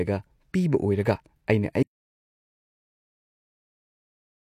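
The input likely dropped out at 1.83 s, through a lost device, link or mute, while the recorder kept writing silence. This audio dropout to silence cuts the speech off mid-flow and leaves dead silence, with no room tone, through to the end.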